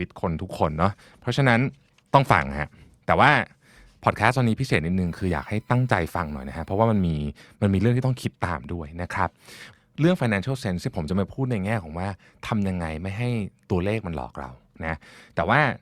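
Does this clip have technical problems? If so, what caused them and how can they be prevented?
Yes. From 5.07 to 7.07 s a thin, steady whine at a fixed 1 kHz sits faintly under the speech, roughly 40 dB below it. This is USB whine: the USB bus pulls current in 1 ms frames, and that 1 kHz ripple leaks into the audio path through shared power or ground, producing a tone locked to the frame rate. Powering the interface separately, or using an isolator or a ground-loop break on the USB line, prevents it.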